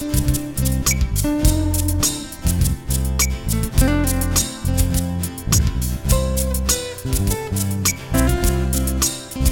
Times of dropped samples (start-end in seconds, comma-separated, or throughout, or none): none